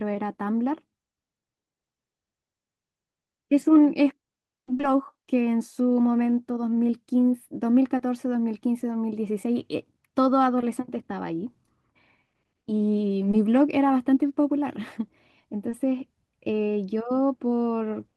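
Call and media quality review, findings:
Short concealed packet loss at 3.61, 4.77–4.85 (two back-to-back), 7.97, 13.31 and 15.69 s: brief smears or wobbles in the speech. Each ~20 ms packet did not reach the decoder in time, so jitter-buffer concealment extended the previous sound and then crossfaded back to the real audio.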